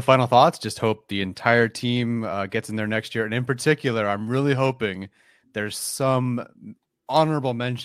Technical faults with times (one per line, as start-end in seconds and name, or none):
none